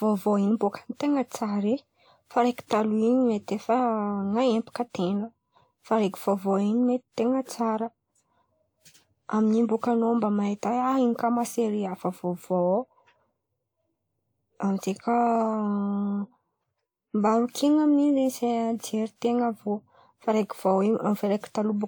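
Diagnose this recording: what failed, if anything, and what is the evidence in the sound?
Generation loss throughout, codec stage: swirly, hollow, smeared speech with blurred attacks and nothing above 20.1 kHz, likely from about four WMA re-encodes fitting 128 kbit/s.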